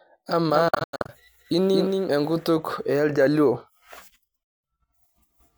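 Speech clip in which, from 0.51 to 2.11 s, a second copy of the sound trails the first by about a fifth of a second, a few dB quieter, with no decay or room colour, and starting and stopping abruptly. This is a doubled audio track, likely from a slower second capture path or two out-of-step copies in an edit. Overlapping this, from 0.68 to 1.10 s, the sound breaks into a scatter of silent holes, about 0.26 s missing in total, the longest about 90 ms. A second dropout follows from 4.43 to 4.64 s, about 0.2 s lost. In both places the sound resumes as if it had kept playing. These are Bluetooth dropouts, likely packets reaching the headphones too late and being discarded.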